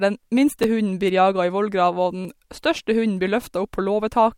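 A brief click-like stutter at 0.63 s, just before "hunden blir jaga i", and a longer buzzy stutter from 2.22 to 2.25 s, right after "jaga i vollgrava og", are both repeated buffers. In each, one tiny slice of speech, about 10.7 ms long, which fits a 512-sample buffer, plays again with hard joins. The first sounds like one extra play, the second like three in a row. New audio reached the device late, so it replayed the last buffer, losing roughly 10 ms and then about 30 ms of speech.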